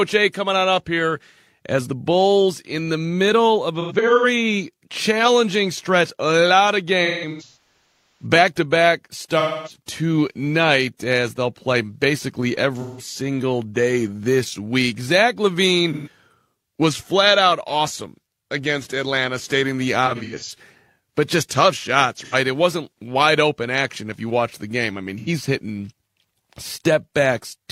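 Speech, with AAC frame loss with concealment. The decoder repeatedly lost frames and filled each gap from the last good spectrum, so the sound turns smeared, noisy or phasey at 3.81–4.25, 7.05–8.26, 9.40–9.76, 12.75–13.05, 15.93–16.08, 20.06–20.50, 22.17–22.35 and 25.19–25.29 s. The worst patch, 7.05–8.26 s, loses about 0.68 s in total, with its longest run around 150 ms.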